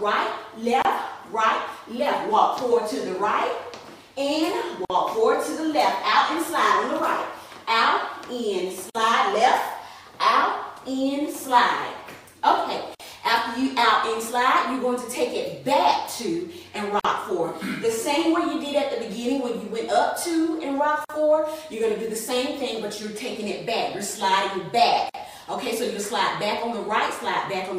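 At 0.82 s, then 4.85, 8.90, 12.95, 17.00, 21.05 and 25.09 s, a gap at a join of encoded pieces cuts the sound: about 27 ms first, then 49 ms each, every 4 s. Untrimmed encoder delay and end padding leave abrupt silences with smeared edges before the sound resumes.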